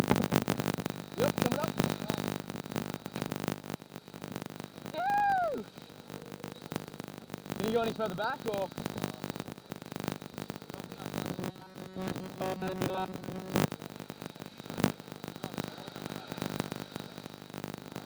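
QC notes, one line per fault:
Throughout: filter restarted on every block. A steady 50 Hz buzz of ticks that tracks the sound's level, as each 20 ms block starts from a reset filter.
11.23–13.66 s: robotic sound from repeated short buffers. A rigid metallic buzz at 188 Hz, likely from a roughly 5.3 ms fragment looped in place of all real audio.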